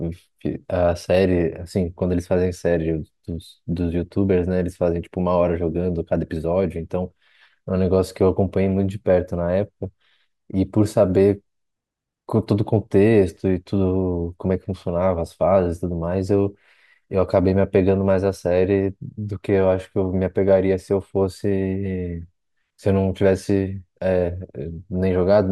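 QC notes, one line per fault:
No faults found in this speech recording. Nothing here calls for a QC entry.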